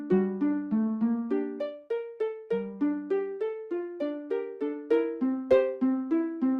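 No technical faults can be heard anywhere in the signal.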